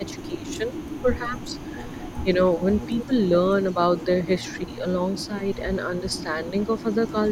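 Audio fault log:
0.0–3.11 s, 3.74–4.85 s and 5.64–7.14 s: speech suppressed in double talk. The speech dips in pieces, about 20 dB at worst across roughly one and a half seconds in the first stretch, then about 10 dB in briefer patches. Both sides likely talked at once, and the echo canceller turned down the wanted speech along with the echo.
0.04–3.31 s and 3.62–7.32 s: echo leak. A faint copy of the speech trails it by 162 ms, about 30 dB below the direct sound, making the speech sound doubled. This is likely loudspeaker pickup that the echo canceller did not fully remove, so it was sent back.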